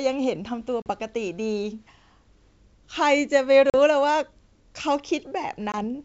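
A speech recording carried over a G.722 wideband call, with packet loss on the ADPCM stream at 0.82 to 0.88 s, 3.70 to 3.75 s and 5.72 to 5.75 s. Gaps of 40, 40 and 20 ms suggest about two, two and one lost 20 ms packets. On a waveform each shows as a flat, hard-edged hole. A spectrogram shows a blank vertical band followed by slightly distorted speech while the decoder's predictor and step size resynchronise with the sender's.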